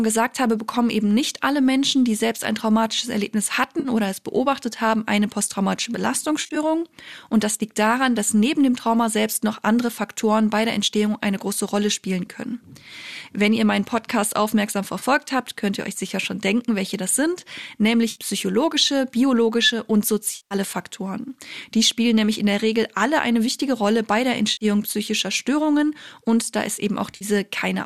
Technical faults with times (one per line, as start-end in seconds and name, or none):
3.79-3.89 AAC frame loss with concealment
6.42-6.57 AAC frame loss with concealment
14.98-15.04 AAC frame loss with concealment
18.11-18.19 AAC frame loss with concealment
20.36-20.55 AAC frame loss with concealment
24.52-24.65 AAC frame loss with concealment
27.11-27.25 AAC frame loss with concealment